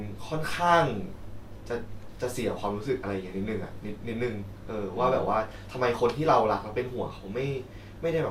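No technical faults are audible.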